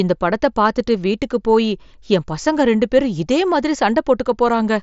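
No faults found; the speech has the expected sound of a Bluetooth mSBC headset link, with nothing above about 7.7 kHz and a light grain on louder passages.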